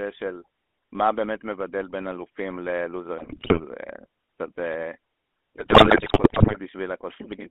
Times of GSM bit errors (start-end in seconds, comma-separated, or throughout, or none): 3.18-3.61, 5.56-6.57